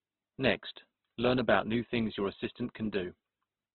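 From start to end the speech has nothing above 4 kHz and carries a rough, grainy texture, with tonal parts turned noisy rather than cleanly thinned. This is likely Opus compression in its music (CELT) mode at a rate around 12 kbps. Starved of bits, the codec fills bands with folded or noise-like energy instead of leaving gaps. That is why it sounds gritty rather than showing the swirling, watery holes of heavily compressed MP3.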